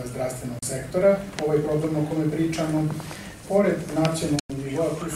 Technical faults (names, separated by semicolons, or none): digital broadcast dropout